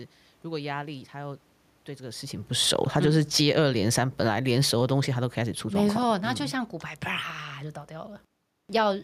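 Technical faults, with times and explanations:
2.53–6.93 s, automatic gain falling: the gain control eases the level down about 12 dB, so speech and room noise sink together. The waveform envelope tapers and the spectrogram dims evenly.
3.56–4.74 s, automatic gain rising: within that fall, gain briefly climbs about 4 dB, swelling voice and background alike. The waveform bulges and the spectrogram brightens uniformly, noise floor included.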